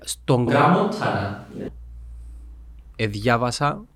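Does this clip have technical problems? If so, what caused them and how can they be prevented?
Yes. From 0.47 s to 1.68 s the speech turns roomy and hollow with thinner bass, at about the same level, with faint background noise; this abrupt switch to a distant microphone likely means the close mic dropped out. Monitor the close microphone and secure its connection.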